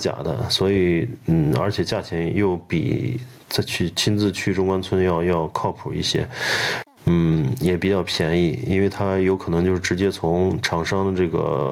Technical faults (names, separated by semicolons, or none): gain pumping